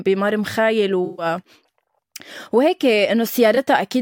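AAC frame loss with concealment at 1.05 to 1.26 s and 3.55 to 3.58 s: the decoder patched missing frames from earlier spectrum, leaving smeared, noisy speech.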